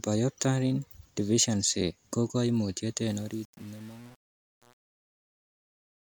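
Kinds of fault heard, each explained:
Truncation distortion on a fade: The fade-out after "deficiency ko koimutiet" keeps too few bits, consistent with about 7, and no dither. Its quiet tail turns gritty.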